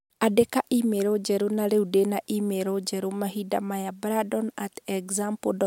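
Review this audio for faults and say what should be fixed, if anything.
Nothing to fix; no faults can be heard in the speech.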